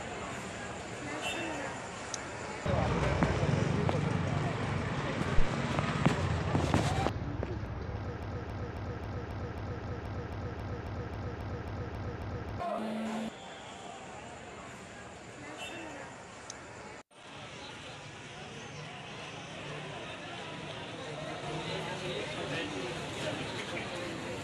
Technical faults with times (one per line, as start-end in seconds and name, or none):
7.66 damaged data in a compressed stream
8.23-12.60 broken-record loop
9.84 damaged data in a compressed stream
12.78 damaged data in a compressed stream
17.22 damaged data in a compressed stream